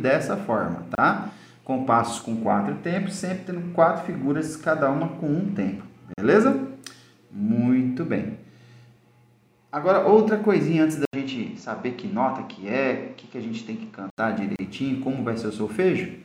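At 0.95 s the sound stops for 29 ms and resumes where it left off. This is a gap at a join of encoded pieces: separately encoded segments were spliced without trimming the encoder's leading delay and final-frame padding. On a spectrogram it appears as a narrow blank column with slightly softened edges.

At 5.26 s a sharp click is heard. Dropped samples are the likely cause, roughly a single sample missing, so the waveform steps abruptly and the spectrum shows one thin vertical line.

The same kind of join gap occurs at 6.14–6.18 s (41 ms).

At 11.05 s an 80 ms silence precedes a duller, boxier sound lasting until 14.18 s. The input probably switched to a poorer device. New noise sits about 40 dB below the signal, and the level barely changes. On a spectrogram the upper band is empty for that stretch.

A final join gap appears at 14.56–14.59 s (31 ms).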